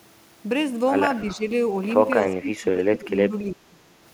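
From 1.24 to 1.44 s the speech briefly dips by about 10 dB over roughly a tenth of a second. This is speech suppressed in double talk, likely because the echo canceller mistook the overlap of both talkers for loudspeaker echo and turned the line down. A deeper occurrence runs from 2.41 to 3.33 s, with drops of about 15 dB across roughly 0.7 s, leaving the voice thinned and patchy. On a waveform these stretches show as pinched sections of the envelope. On a spectrogram the harmonics fade in blocks, with the upper bands vanishing first.

At 3.47 to 3.51 s there is a brief echo leak: a faint copy of the voice arriving 289 ms late, about 30 dB below the speech, likely residue that the far-end canceller failed to remove. On a spectrogram it appears as a weak, smeared ghost of earlier harmonics.

Right after, from 3.52 to 3.8 s, the suppression returns hardest, with cuts of about 25 dB over roughly 0.3 s. 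The sound nearly drops out, likely from the same double-talk gating. The waveform collapses to near-silence in places.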